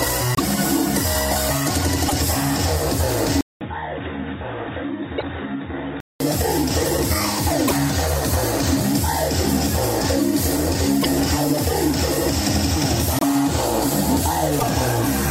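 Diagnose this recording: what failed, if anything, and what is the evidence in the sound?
Seven short glitches land at 0.35, 2.08, 5.17, 7.67, 11.0, 13.19 and 14.58 s. Each lasts about 0.05 s, and the sound skips ahead there with a brief chirpy or noisy smear. That's likely a broken MP3 bit reservoir at the codec or storage stage. Frames went missing, so the next frames reached back for borrowed bits and decoded garbage. The length fits a couple of 24 ms frames.

From 3.41 to 6.2 s the sound goes dull and boxy, with nothing above 3.8 kHz. It also drops by roughly 10 dB and picks up a new noise floor about 50 dB down. There's a 200 ms gap at the changeover. It points to the input switched to a poorer device, likely at the driver stage, such as a fallback to a narrowband headset profile, before the original input comes back.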